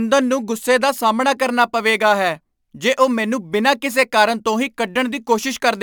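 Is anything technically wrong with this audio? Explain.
Yes. Sample clock jitter runs from 1.45 s to the end: the converter's clock wavers by a few microseconds, so samples land early or late and steep waveform slopes gain error, heard as a hiss about 30 dB down that thickens on loud, bright speech and drops away in pauses.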